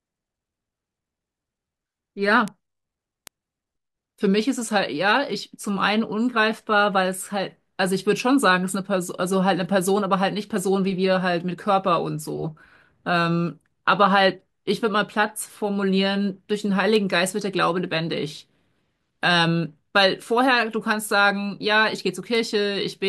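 Bit error spikes at 2.48, 3.27, 16.96 and 22.35 s: single flipped bits make one-sample jumps, about -7 dBFS (last about -13 dBFS), heard as sharp, broadband ticks unrelated to the speech.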